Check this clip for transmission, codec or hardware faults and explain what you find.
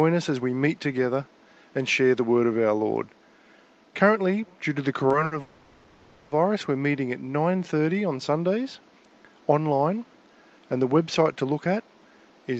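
Four jitter-buffer faults affect the transmission of this speech, all between about 5 and 12.5 s. The audio is band-limited near 12 kHz, as expected from an Opus-coded call, and the room noise sits about 32 dB below the speech.

Short stall from a late packet, 5.25 to 5.33 s: a packet arrived late and the buffer ran dry, so the receiver stretched the last sound by 60 ms and then resumed with nothing lost. The result is a held syllable with a faint buzz. On a spectrogram the harmonics run flat and smeared for that stretch.

Call audio freeze, 5.41 to 6.33 s: the sound hangs for about 0.9 s as a fading buzzy continuation that never drops to silence. It then carries on from exactly where it stopped. The cause is likely packets held up in transit, emptying the buffer. A waveform shows a decaying, repetitive patch inserted into the speech.

Jitter buffer slow-down, 7.52 to 7.76 s: the buffer was rebuilding its reserve by repeating pitch periods. 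This added 40 ms and dropped the speed to 86% at unchanged pitch, which draws the sounds out. Spectrogram features look horizontally stretched.

Jitter buffer speed-up, 11.65 to 12.54 s: the buffer held too much audio and trimmed short pitch-period chunks, removing around 70 ms in total. Speech runs at 108% speed with the same pitch and sounds hurried. Syllables on the spectrogram appear slightly compressed in time.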